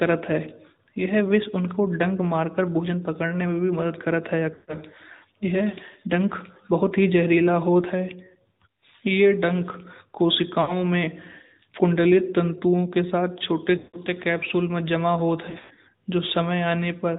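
Throughout, the speech carries the sound of the AMR narrowband mobile codec. Everything above 4 kHz is missing, and the vocal-tract model with sparse pulses gives a buzzy, synthetic edge that fits a mid-range rate near 10.2 kbps. Unlike a plain low-pass filter, this codec also adds that artificial texture, and unlike wideband AMR, the band stops hard at telephone width.

Lost AMR speech frames interrupt it four times. At 4.54 s the decoder reuses the last good pitch and tract settings with falling gain, so about 140 ms of audio is smeared and fades. At 10.62 s a shorter 60 ms loss is drawn out more briefly. At 13.78 s the loss lasts about 160 ms, and at 15.50 s losses are scattered over 360 ms, with runs up to 100 ms. A bare dropout would cut straight to silence. Here the sound stretches, thins out, and returns rough.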